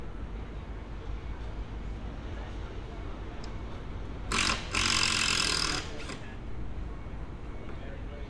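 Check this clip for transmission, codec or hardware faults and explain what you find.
No transmission, codec or hardware faults are audible here.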